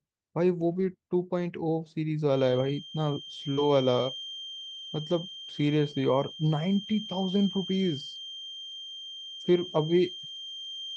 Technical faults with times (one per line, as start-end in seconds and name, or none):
0.59-0.85 lost packet rebuilt from error correction
2.25-10.97 feedback whistle
2.47-2.69 lost packet rebuilt from error correction
3.53-3.59 short concealed packet loss
3.57-3.59 lost packet rebuilt from error correction
5.91-5.93 lost packet rebuilt from error correction
6.83-6.89 lost packet rebuilt from error correction